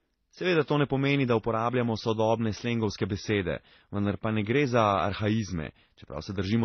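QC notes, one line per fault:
Throughout, transcoding between lossy codecs: nothing above 6.2 kHz, with smeared, swirly artefacts layered together, likely low-bitrate MP3 re-encoded as HE-AAC rather than one codec's uniform signature.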